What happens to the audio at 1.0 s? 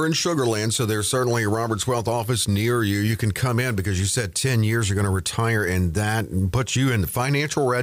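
Nothing goes wrong at 1.0 s; the audio is intact at that moment.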